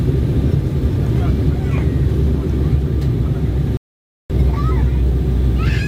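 A playback stall interrupts the audio at 3.77 s: output falls completely silent for about 0.53 s and resumes at 4.30 s. The likely cause is the player running out of buffered data or having its thread blocked. Unlike a brief dropout, which loses a few milliseconds, this is a long, clean hole with a hard stop and restart.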